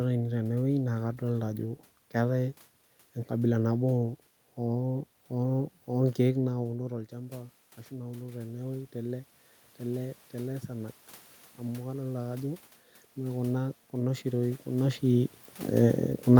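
From 6.56 to 9.29 s, the voice and room noise swell together as automatic gain rising (about 5 dB) compensates for the input falling roughly 13 dB when the talker moves back. It happens again from 11.59 to 14.96 s, rising about 4 dB.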